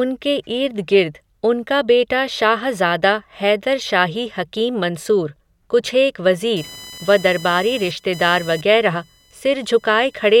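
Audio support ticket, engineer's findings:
Computer activity noise, 6.56 s to end of clip. Onset right after "हकीम मंसूर कुछेक". Buzzing, chirping texture pulsing at around 1 kHz, roughly 20 dB below the speech. Tracks machine activity, not program material. Probable cause: CPU, GPU or mouse load swings modulating the shared ground of the audio interface, so the ground noise rides into the signal path. Check grounding, USB isolation, and interface power.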